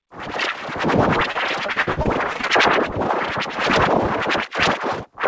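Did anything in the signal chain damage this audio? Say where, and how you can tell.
Yes. Between 1.32 and 2.51 s the sound turns choppy, with a stuttering quality where short pieces drop out and are replaced by smeared continuations. This is repeated packet loss at the network stage: ten gaps, none longer than 50 ms, arriving one after another. The receiver's jitter buffer patched each hole by extending the last sound, so roughly a quarter of that stretch is concealment. The G.722 call codec's 8 kHz ceiling is audible throughout but isn't the damage.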